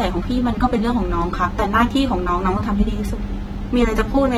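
AAC compression runs through the whole clip, with plainly audible coding damage. The speech sounds smeared and warbly, likely from AAC-LC quantising each frame's spectrum too coarsely at a rate that fits about 32 kbps, and nothing is heard above 19.3 kHz.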